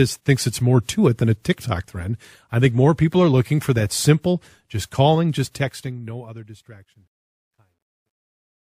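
Speech whose fade-out after "that simple just calling" turns gritty from 5.35 s and is at its worst between 6.93 and 8.75 s. That is truncation distortion on a fade: the fade stage, which sounds like a 12-bit one, rounds the falling level to coarse undithered steps. The fade itself starts at about 5.35 s.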